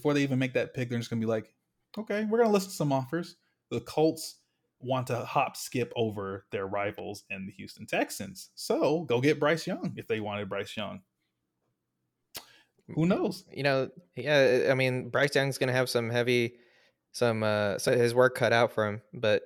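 A recorder likely working in 6-second chunks drops audio at each handover: a few tens of milliseconds go missing between chunks and the sides butt together, so the speech skips at 5.93 s, after "want to hop skip", and at 17.88 s, before "his work".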